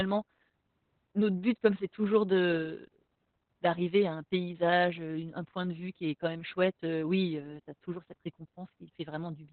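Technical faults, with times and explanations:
Throughout, Opus voice compression: the speech is heavily degraded, with nothing above about 4.4 kHz, so it sounds muffled and telephone-like, while coarse excitation coding in SILK's narrowband linear-prediction mode makes it hoarse and slightly robotic, which fits a very low bitrate near 8 kbps.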